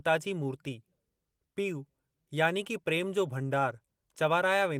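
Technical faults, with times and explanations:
No technical faults can be heard in this speech recording.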